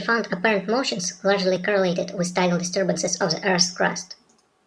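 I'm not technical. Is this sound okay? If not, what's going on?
No, it isn't quite right. From start to finish the speech plays too fast and too high, a bit chipmunk-like. That's a wrong sample rate: the audio is being played back faster than it was recorded, with nothing correcting for the difference. It runs about 1.38 times normal speed, and the pitch rises by about five and a half semitones along with it. That fits a 16 kHz recording played back at 22 kHz.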